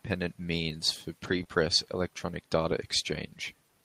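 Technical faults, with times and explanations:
1.23–1.41 s, lost packet rebuilt from error correction: after "means for", the sound turns rougher and noisier. Lost packets were replaced by low-bitrate backup copies, so no gap.
1.43–1.47 s, short concealed packet loss: about 20 ms never arrived before "electronic data". The decoder extended the preceding sound to fill it, leaving a brief smear.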